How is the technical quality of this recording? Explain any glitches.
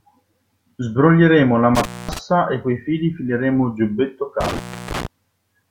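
The recording has two dropouts. Intermittent contact at 1.75–2.19 s and 4.4–5.07 s: a loose cable or plug opens for about 0.23 s, then 0.33 s, so the speech cuts out between crackling edges, leaving faint hiss.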